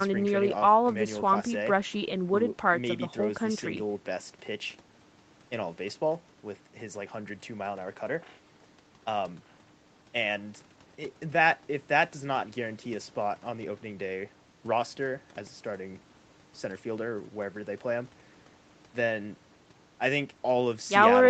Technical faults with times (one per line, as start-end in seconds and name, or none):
none